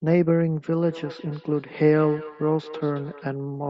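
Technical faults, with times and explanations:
0.77–3.36 s, feedback echo between two devices: a second device's playback re-enters a microphone, returning speech roughly every 200 ms, about 16 dB down, as fading spectrogram copies.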